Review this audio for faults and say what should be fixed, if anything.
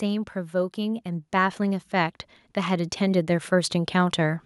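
From 0.51 s to 4.4 s the level climbs steadily by about 11 dB, and the background noise rises along with the speech rather than staying put. That is automatic gain rising: the input's automatic gain control judged the signal too quiet and kept pushing its gain upward over several seconds, lifting everything it received. To prevent it, disable the AGC and set a fixed input gain with adequate headroom before recording.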